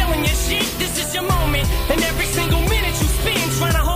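From start to finish the audio carries low bit depth with noise shaping: only 6 bits are used, and the rounding error is pushed upward, leaving a steady, thin hiss roughly 15 dB below the signal. Unlike plain truncation's flat, gritty distortion, this hiss climbs sharply toward the treble.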